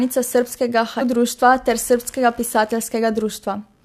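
Computer activity noise runs through the whole speech clip: a faint buzzing, pulsing at around 70 times a second and sitting well below the speech. It comes from processor, graphics or mouse load shifting the ground shared with the audio circuit. Unlike steady mains hum, its pitch and texture have a scratchy, chirping quality, and it tracks what the computer is doing rather than the speech, continuing through pauses.

At 1.00 s, just before "društva ter", there is damaged data in a compressed stream. A short corrupted stretch made the decoder misread its frames, lose sync and hunt for the next valid header, producing a brief glitch of about 18 ms. What separates it from an ordinary click or dropout is that it comes from the decoder losing its place in bad data.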